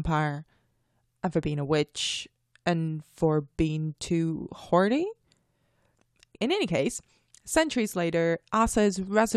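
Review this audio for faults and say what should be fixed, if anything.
Nothing stood out on listening, so there is nothing here to fix.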